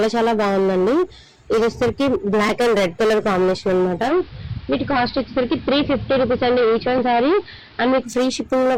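Hard clipping runs through the whole clip. The signal reaches the converter or a later gain stage about 15 dB hotter than it can pass, so every peak is sliced flat, and around a third of the waveform sits pinned at the ceiling. Those squared-off tops generate harmonics far up the spectrum, so all of the louder sound carries a harsh, buzzy fuzz instead of occasional crackle.

Digital radio blending to analogue begins at 4.03 s. The hybrid receiver loses its digital stream and cross-fades to the station's AM broadcast over roughly 0.1 s (107 ms), then returns to digital at 8.09 s. During the AM stretch a hiss floor rises to roughly 30 dB below the programme. The loudness stays level across both transitions, so the change is heard in tone and noise rather than volume.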